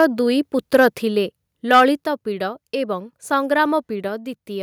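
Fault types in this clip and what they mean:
Microphone overload: The loudest moments of the speech break up with a harsh, crackling edge. The peaks are flattened where the waveform should keep rising. This happens at 0.0 to 0.05 s, 0.74 to 0.86 s and 1.73 to 1.83 s. The overshoot grows each time, from about 2 dB to about 4 dB and then about 6 dB. In the last burst roughly a tenth of the samples are cut off. The likely cause is an input level set too high for the converter.
Microphone volume stepped down: At 2.04 s the whole signal drops by about 4 dB in one abrupt step. Speech and background fall together, with no gradual fade. The drop comes shortly after the worst distorted burst, which ended at 1.83 s. That timing points to call software reacting to the clipping. It most likely cut the device's input gain in a single move to stop further overload.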